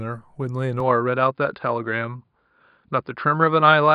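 At 0.80 s the speech turns duller and boxier, with nothing above 5 kHz. Likely an input switched to a poorer device, with no gap and no level jump.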